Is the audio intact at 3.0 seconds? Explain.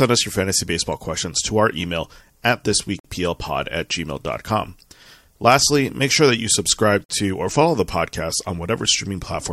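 No. Right after "to our email at", a gap between chunks cuts the audio from 3.00 to 3.05 s, a silence of about 48 ms at a join between chunks. It sounds like a brief hard-edged dropout. The waveform falls abruptly to a flat line, and the spectrogram shows a sharp, empty vertical band across all frequencies.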